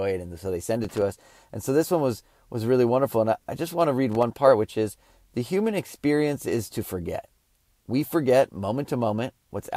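At 0.84 to 1.02 s and again at 4.12 to 4.23 s, the speech breaks into loose connector crackle: a worn contact in the signal path makes and breaks, chopping the audio into irregular scratchy bursts.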